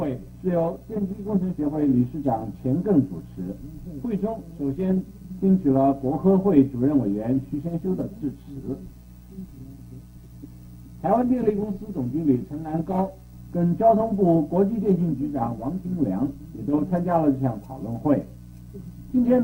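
Nothing stood out on listening to this recording.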